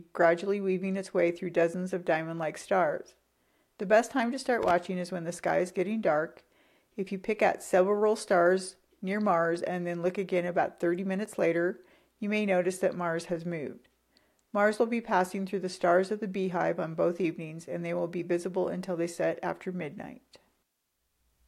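At 4.63 to 4.71 s there's a short burst of loose connector crackle, a worn contact making and breaking so the signal chops into scratchy pops.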